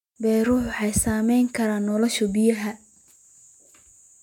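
Speech recording with no audible technical faults.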